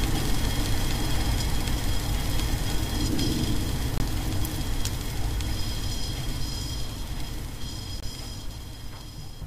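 Right around 3.98 to 4.00 s there's a gap between chunks, and it comes back at 8.00 to 8.03 s, so the holes land every 4 s. Each one is about 25 ms of silence. It sounds like the audio was handled in 4-second pieces, with a little dead air slipped in at each join, probably padding or a late start on the next piece. Nothing goes missing; the sound just stops briefly and picks up again.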